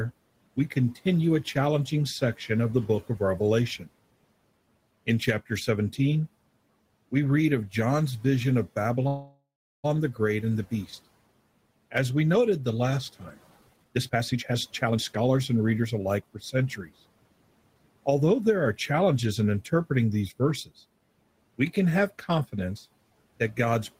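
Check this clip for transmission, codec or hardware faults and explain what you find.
Two transmission faults are present, a freeze and a speed-up. The room noise sits about 23 dB below the speech.

From 9.07 to 9.86 s there is a call audio freeze. Packets were likely delayed, draining the jitter buffer. The last sound buzzes or hisses, fades, then goes silent for 0.39 s. Nothing is lost.

From 13.50 to 16.27 s comes a jitter buffer speed-up. The receiver trims tiny pitch-period pieces, about 0.7 s in total. Speech runs at 128% speed, same pitch, sounding rushed.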